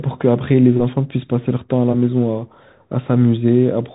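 Bluetooth CVSD headset codec throughout: one-bit up-down coding at a rate fitting a 64 kbps link cuts everything above 3.8 kHz, leaving scratchy sibilants and granular hiss.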